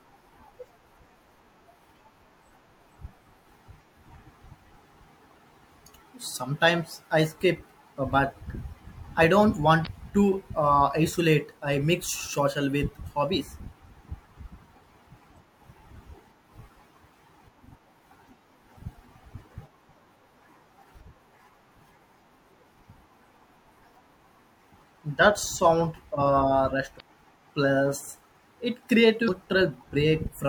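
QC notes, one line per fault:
9.83–9.87 s, 26.97–27.01 s and 29.25–29.29 s: damaged data in a compressed stream. Each is a short blip of about 40 to 50 ms cutting into the speech. A stretch of the compressed bytes got mangled, so the decoder couldn't make sense of those frames, lost its place and had to hunt for the next valid frame header. What comes out while it scrambles is a brief glitch instead of clean audio.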